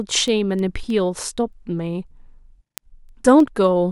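From 0.28 s to 3.71 s, the speech carries word clock ticks. They come about every third of a second, around ten in all. The receiving device is running on its own clock rather than locking to the sender's. The two clocks drift apart by about 70 parts per million. Each time they slip past each other, a single sample is dropped or repeated. That small break in the waveform is heard as a brief click, recurring at a steady rate.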